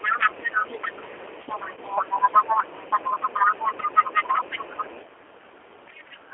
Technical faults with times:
0.00-6.33 G.729 codec
0.00-5.05 other side's voice leaking through
1.74-1.79 VoIP packet loss concealed by the speech codec
5.88-6.17 other side's voice leaking through
6.25-6.33 speech suppressed in double talk

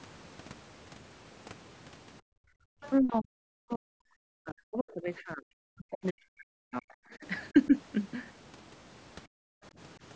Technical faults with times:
2.21-2.72 background gated by the echo canceller
2.82-2.91 other side's voice leaking through
3.00-7.25 speech suppressed in double talk
7.52-7.74 speech suppressed in double talk
9.57-9.62 speech suppressed in double talk

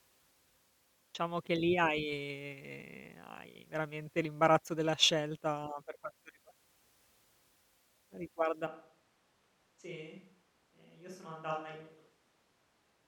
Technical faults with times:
8.67-13.08 switch to a distant microphone

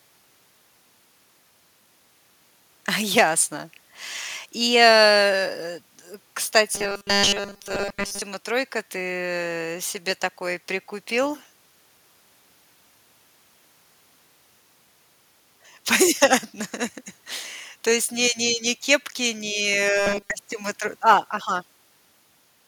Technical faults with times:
6.75-8.22 robotic sound from repeated short buffers
19.97-20.31 robotic sound from repeated short buffers

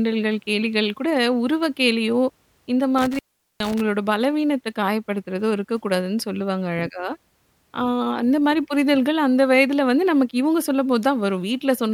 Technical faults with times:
2.98-3.81 intermittent contact

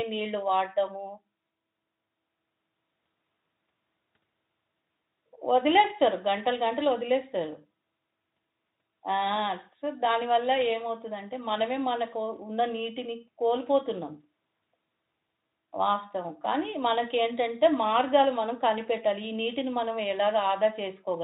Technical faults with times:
none

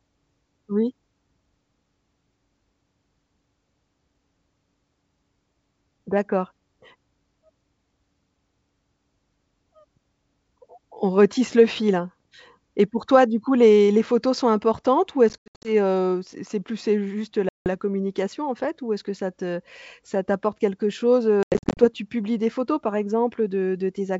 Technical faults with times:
15.29-15.72 packet loss on an ADPCM call
17.49-17.67 packet loss on an ADPCM call
21.43-21.85 packet loss on an ADPCM call

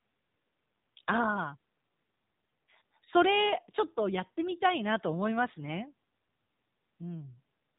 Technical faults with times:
0.00-7.78 AMR narrowband mobile codec

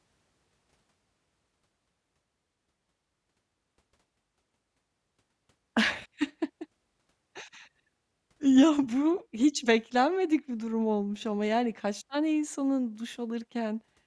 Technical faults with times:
none

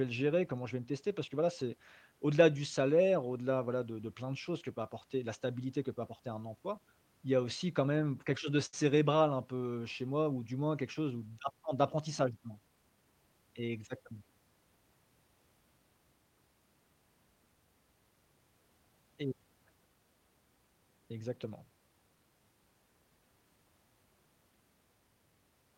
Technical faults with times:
8.65-8.75 short stall from a late packet

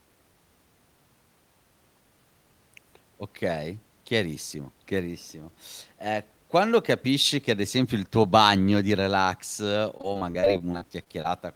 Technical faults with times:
9.97-11.26 repeated packet loss (robotic sound)

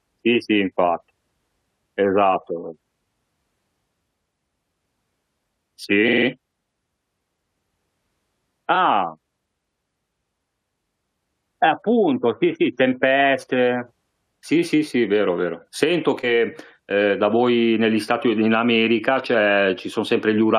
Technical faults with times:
6.07-6.26 repeated frames
8.74-8.77 repeated frames

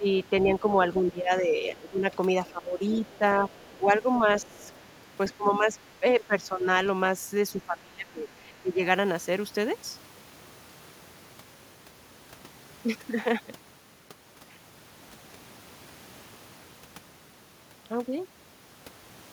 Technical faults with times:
0.00-2.08 speech suppressed in double talk
2.46-2.51 other side's voice leaking through
2.47-4.70 speech suppressed in double talk
3.06-3.17 other side's voice leaking through
3.62-3.77 other side's voice leaking through
4.16-4.84 other side's voice leaking through
5.34-6.67 speech suppressed in double talk
7.53-8.80 speech suppressed in double talk

